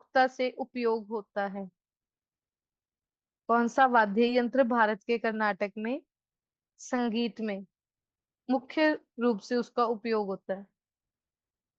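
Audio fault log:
No fault is heard in this speech clip.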